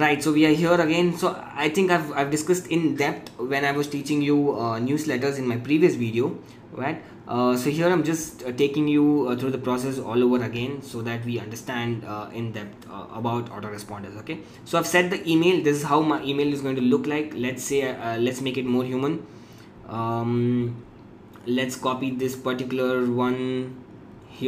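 No technical faults can be heard anywhere in this recording.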